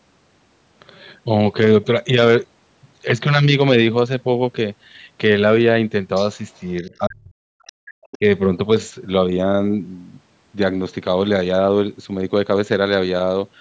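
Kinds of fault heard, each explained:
other side's voice leaking through: A faint second voice surfaces in the speech, likely residual echo from a loudspeaker that the echo canceller failed to remove from the microphone signal. It appears as a brief scrap from 6.51 to 6.60 s, about 40 dB below the talker, and again from 8.02 to 8.18 s, where it is stronger, about 20 dB below the talker.
speech suppressed in double talk: From 6.81 to 7.85 s the talker's speech dips, for roughly 0.7 s in total, with the deepest dips around 40 dB. A shorter dip of about 25 dB follows between 8.17 and 8.25 s, right where the leaked voice ends. This pattern is likely the echo canceller attenuating the whole signal while both sides were talking, because it could not separate the near talker from the echo.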